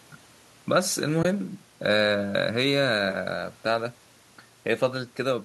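At 1.23 to 1.25 s the speech drops into a brief AAC frame loss with muting: about 20 ms of zeroed spectrum, which fits two lost 10 ms frames, faded smoothly.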